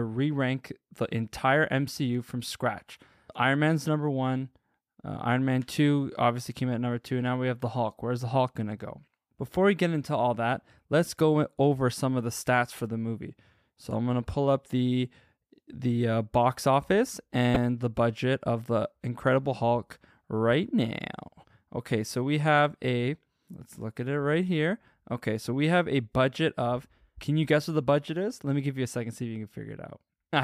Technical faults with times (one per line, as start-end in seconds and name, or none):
17.53-17.56 damaged data in a compressed stream